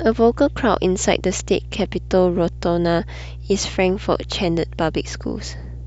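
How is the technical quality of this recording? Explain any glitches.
The recording is marred by a single persistent fault: mains hum running under the speech from start to finish.

The hum sits at 60 Hz, the frequency of the local power supply, which has leaked into the signal path through a ground loop or the field of a nearby transformer. It is loud, around 15 dB below the speech, so it comes across as a constant low drone beneath every phrase and through the pauses. On a spectrogram it shows as an unbroken horizontal line at 60 Hz, with fainter lines at its low multiples. In the waveform, the quiet gaps are never flat but carry a steady periodic ripple.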